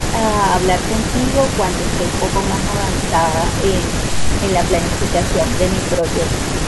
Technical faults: none

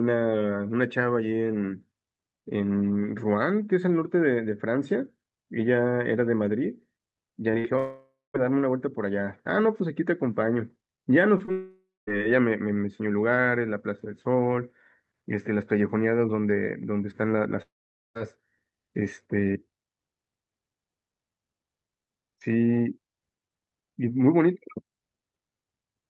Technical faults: repeated packet loss (robotic sound); long network dropout; scattered short gaps

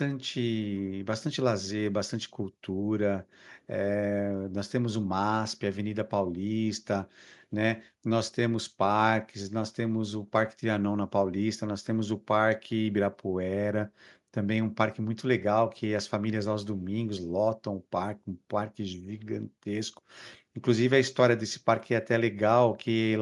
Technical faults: none

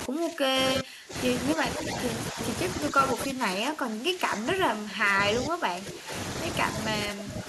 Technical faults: speech suppressed in double talk; echo leak

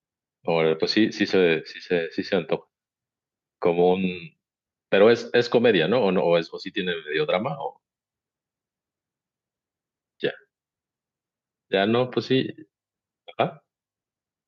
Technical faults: none

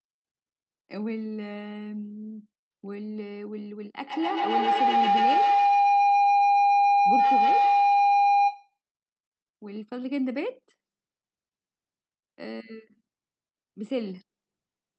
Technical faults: feedback howl

